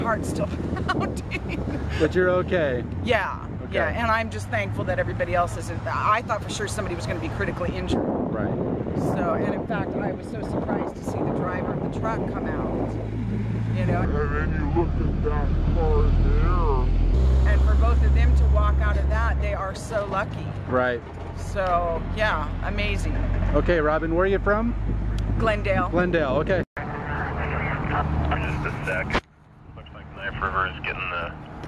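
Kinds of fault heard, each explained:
wrong sample rate: From 14.05 to 17.14 s the samples are clocked out slower than they were captured, with no conversion, which fits 48 kHz material played at 32 kHz. The sound runs at 0.667 times speed and drops 7 semitones in pitch.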